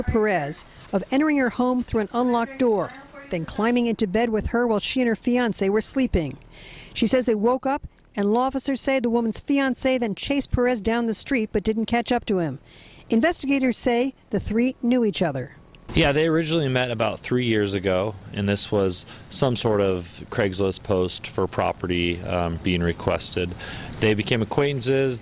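Nothing stood out on listening; no fault could be heard anywhere in the audio.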